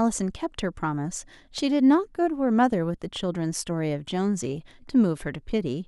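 DAB burbling appears from 4.42 to 4.71 s, a stretch of about 0.3 s late in the speech. Weak reception let a small share of bit errors, around a fifth of a percent, slip past the error correction into the MP2 stream, corrupting samples so short blips of noise appear in single sub-bands, and scale factors so sub-bands leap in level for up to a frame. The result is burbling noise blips laid over the speech, spread across 15 damaged frames.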